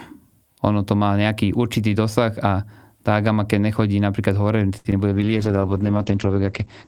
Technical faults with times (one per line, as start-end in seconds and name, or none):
4.77-4.87 short stall from a late packet
4.91-5.13 short concealed packet loss
5.14-6.87 call bitrate drop